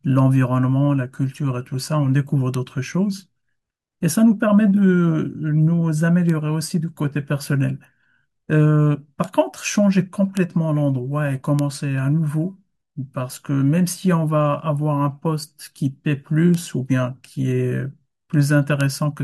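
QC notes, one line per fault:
2.54, 6.30, 9.24, 10.37, 11.59, 16.54 and 18.81 s: bit error spike. Each is a single sharp tick over the speech. A flipped bit throws one or two sample values far off by a power of two before they snap back. Such a short jump has energy across the whole spectrum and no relation to the signal. Peaks reach about -1 dBFS at 2.54, 10.37, 11.59 and 18.81 s, about -7 dBFS at 9.24 and 16.54 s, and about -13 dBFS at 6.30 s.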